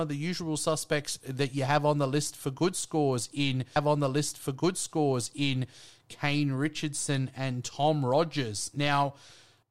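At 3.76 s, just after "for good scores in", a stream segment repeated: about 2.0 s of speech replays, until 5.78 s, after a small blip at the jump back.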